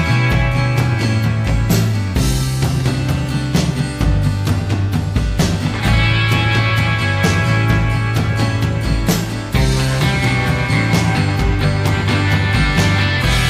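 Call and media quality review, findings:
No faults observed in the audio; nothing to escalate.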